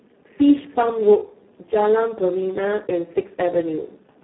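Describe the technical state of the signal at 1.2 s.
Speex codec damage, present throughout and so at 1.2 s: at a very low bitrate, likely about 4 kbps, CELP coding leaves the speech hoarse and robotic, band-limited near 200 Hz to 3.4 kHz, nothing above 3.9 kHz.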